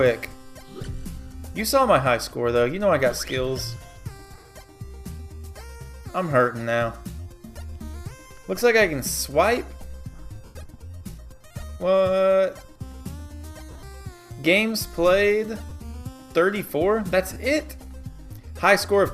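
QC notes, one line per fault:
4.33–4.49, 10.45–10.56, 13.71–13.83, 15.70, 17.33–17.36 s: lost LE Audio frames. Short dropouts where the decoder repeats the last spectrum with scrambled phase, so tones smear into noise.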